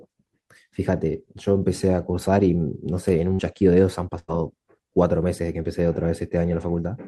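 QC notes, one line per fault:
3.33–3.41 s and 4.19–4.30 s, burst of packet loss: speech stops for about 60 ms and then about 100 ms, and each gap is papered over with a continuation of the last sound that fades out, a held buzz on voiced parts or a dying hiss otherwise. The speech then picks up further along, with that stretch gone. Unlike a plain dropout there is no hard silence or click, and unlike a stutter nothing repeats.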